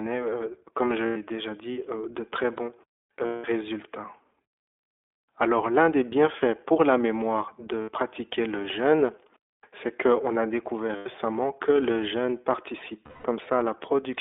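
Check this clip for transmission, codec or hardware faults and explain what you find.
Two faults are present: iLBC codec coloration across the whole speech clip, and five short dropouts from lost iLBC frames.

The iLBC codec damage runs throughout. The audio is confined to a 300 Hz to 3.5 kHz telephone band, with nothing above 4 kHz. Each short frame's excitation is coded independently, which fits the 15.2 kbps, 20 ms frame mode. The result is plainly audible roughness and a synthetic edge on the speech.

Lost iLBC frames occur at 1.06–1.17 s, 3.26–3.46 s, 7.82–7.90 s, 10.96–11.07 s and 13.06–13.26 s, with gaps of 100, 180, 60, 100 and 180 ms. The decoder fills each gap by repeating the last pitch cycle mixed with noise. The longer gaps fade, and each sounds like a held, slightly breathy vowel. Because the frames stand alone, the voice is right again almost at once after each gap.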